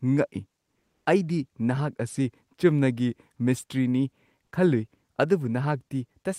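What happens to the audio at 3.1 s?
At 3.1 s the speech continues cleanly, with no dropout, click, distortion or other fault at that point.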